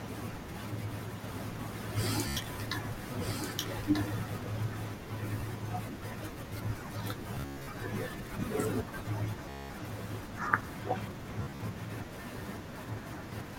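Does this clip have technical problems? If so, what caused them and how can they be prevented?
Yes. A doubled audio track runs from 1.24 s to 4.94 s: a second, full-band copy of the speech trails the original by about one and a half seconds, sitting about 5 dB lower, with no decay or room colour, and it cuts in and out abruptly at those edges. The likely cause is a second, slower capture path being mixed in alongside the direct one. Muting or routing out the redundant input prevents it.

Bluetooth stutter occurs at 2.28 to 2.37 s, 5.41 s, 7.35 to 7.67 s, 9.49 to 9.70 s and 11.42 to 11.60 s. When packets arrive late or not at all, the receiver replays its last short slice of audio, giving a buzzing, machine-gun repeat before the speech resumes further on, as if it had kept playing. About 87 ms goes missing at 2.28 s, roughly six packets' worth. At 5.41 s only a single packet's worth, about 15 ms, is lost. 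The worst burst, at 7.35 s, drops about 247 ms scattered over 319 ms, with one unbroken gap of 116 ms. About 203 ms drops out at 9.49 s. At 11.42 s about 116 ms is lost across 174 ms. Keeping the headset close to the host, away from Wi-Fi congestion, or using a wired connection prevents it.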